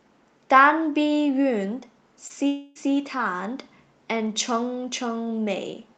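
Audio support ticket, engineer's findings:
Short concealed packet loss, 2.27–2.31 s: quick smear in the speech. Receiver missed about 20 ms of audio in time, so the decoder stretched the last sound over the hole and blended back into real audio. Loss concealment on the receive side.

Long network dropout, 2.47–2.77 s: speech turns into a buzzy continuation of the last sound that fades over about 0.28 s, then real audio picks up further on with that stretch gone. No dead silence, since concealment fills the whole gap. Likely a network stall upstream of the jitter buffer. Top end stops near 8 kHz throughout, which fits the Opus call path.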